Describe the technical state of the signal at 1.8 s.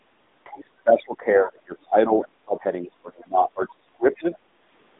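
At 1.8 s the speech carries AMR narrowband mobile codec damage. It is band-limited to roughly 200 Hz to 3.7 kHz, with buzzy, synthetic texture that suggests AMR-NB near 10.2 kbps. A spectrogram shows nothing above 3.8 kHz.

The moment also falls within speech suppressed in double talk, from 0.44 to 2.64 s. The voice dips and breaks up, most likely because an echo canceller attenuated the talker, by up to around 25 dB, while the far side spoke. The waveform shows sagging, chopped envelopes.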